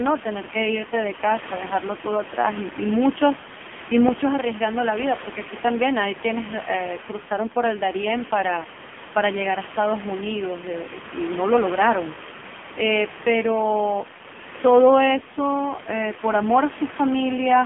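AMR narrowband mobile codec damage runs throughout the speech: nothing above 3.5 kHz passes, and the heavy buzzy, synthetic quality fits a low rate near 5.9 kbps, with room noise about 14 dB below.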